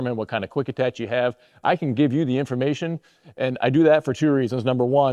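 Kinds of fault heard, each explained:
Nothing stood out on listening; no fault could be heard anywhere in the audio.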